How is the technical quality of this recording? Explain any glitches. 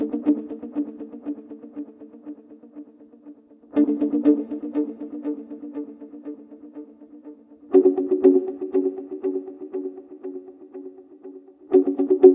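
No glitches or technical faults can be heard anywhere here.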